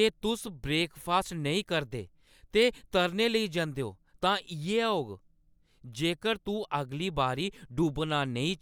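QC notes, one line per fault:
No faults were found in this speech recording. Nothing in it calls for a timestamped entry.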